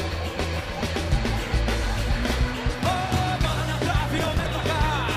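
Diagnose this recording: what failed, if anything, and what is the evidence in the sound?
Processor overload crackle at the driver/buffer stage, from 4.18 to 4.47 s: a gritty burst of crackle riding on the sound. The processor kept missing its deadlines, which fits buffers of around 10 ms. Each late one was skipped, leaving dozens of hard-edged gaps.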